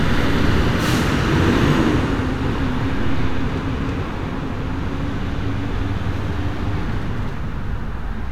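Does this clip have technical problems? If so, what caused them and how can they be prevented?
No, there are no technical problems in this recording.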